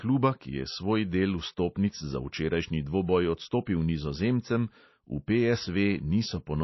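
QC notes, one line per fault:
Throughout, MP3 compression: the speech is likely passed through a heavily starved MP3 encoder, with damage plainly audible and a bandwidth that fits a bitrate near 24 kbps. Short of bits, it has removed everything above 5.8 kHz, leaving the speech dull and muffled, and drops quiet frequency lines that flicker in and out between frames. That produces a watery, swirling texture, metallic chirps on s sounds, and consonant onsets that smear rather than land cleanly.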